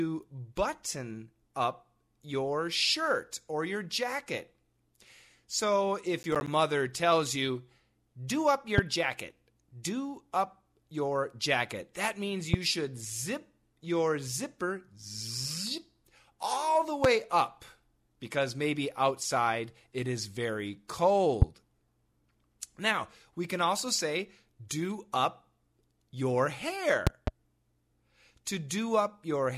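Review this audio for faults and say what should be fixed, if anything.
From 6.23 to 6.48 s the speech takes on a gritty, tearing crackle, made of a handful of short holes of silence with hard edges. This is processor overload crackle. The system could not finish several audio buffers in time, and each missed deadline left a gap rather than sound. The spacing fits buffers of around 10 ms. To prevent it, reduce the processing load or enlarge the buffer so every block finishes before its deadline.

A sharp loud pop sits on top of the speech at 8.78, 12.54, 17.04 and 21.42 s, and a pair of pops falls between 27.07 and 27.30 s. Each one peaks about 20 dB above the surrounding sound, and the speech carries on underneath. The likely cause is a sudden voltage step or pulse entering the chain, for example from a connector, a switch, static discharge or a driver glitch. To prevent it, secure the cables and connectors, ground the setup properly, and avoid switching or plugging in equipment while recording.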